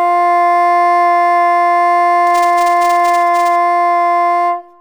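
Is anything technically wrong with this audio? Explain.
Yes. From 2.27 to 3.56 s the music carries buffer tearing. The writing and reading of a ring buffer have slipped so they cross every period, which fits a 128-sample buffer. A small slice of each block, around a few percent, repeats audio from roughly 10 ms earlier, joined hard at both edges. The result is a rattling, robotic buzz at 345 Hz riding on the music. A spectrogram shows a comb of lines at 345 Hz and its harmonics, and the waveform shows regularly spaced discontinuities.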